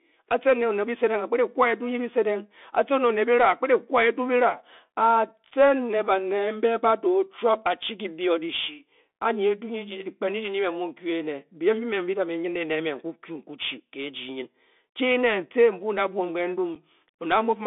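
From start to end, the speech runs through a Bluetooth CVSD headset codec. The band is narrow, roughly 200 Hz to 3.6 kHz. Nothing bright survives above that. CVSD codes each sample as one bit, up or down, with a step size that adapts. The damage is plainly audible. Sharp, loud high sounds outrun the step and smear. S sounds turn scratchy. A grainy hiss sits under the speech. The grit fits a 64 kbps link.

At 5.51 s there is unconcealed Bluetooth headset packet loss. About 7.5 ms of audio drops out, which points to a couple of lost packets. Nothing fills the gap. The speech stops and restarts with hard edges. The same fault returns at 16.75 s, again losing about 7.5 ms. It gives another short, abrupt hole in the sound.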